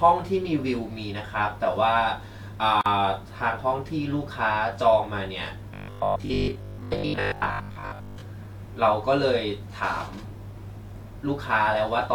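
A speech clip with two faults. At 2.81 to 2.86 s there is a gap at a join of encoded pieces. A 46 ms silence cuts into continuous speech, with its edges smeared by the codec. The sound then resumes where it stopped. This points to separately encoded pieces joined without trimming their start delay and end padding. From 5.74 to 8.22 s the speech turns robotic, a rigid metallic buzz at 50 Hz. This is likely robotic sound from repeated short buffers. About a 20 ms chunk loops, covering most of the stretch, while real audio is skipped.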